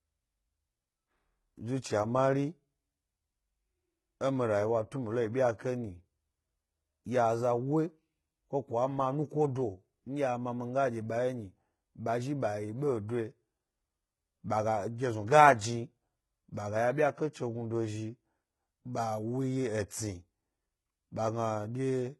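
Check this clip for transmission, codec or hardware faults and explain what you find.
One codec fault runs through the whole clip. Throughout, s sounds turn gritty and lispy and the treble sounds metallic, with nothing above 11.8 kHz; this is likely HE-AAC compression at a very low bitrate around 16 kbps, where the treble is rebuilt from copied lower bands rather than coded.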